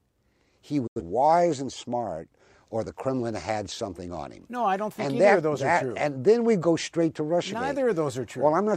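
At 0.87 s the speech drops abruptly into silence, with a very quick fade of about 8 ms rather than a hard click, and returns at 1.02 s with nothing carried across the gap. This is a digital broadcast dropout: the receiver stopped getting usable frames and muted its output until valid ones arrived again. About 85 ms of programme was lost, which fits two missing frames, so the speech resumes later in the programme rather than where it left off.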